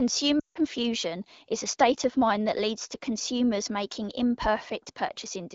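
From 0.39 to 0.59 s the speech drops to near silence within two frames, then returns briefly weak and rough. These are lost AMR speech frames: about 160 ms failed, fitting a run of eight, and the AMR-WB decoder reused its last pitch and vocal-tract settings with falling gain.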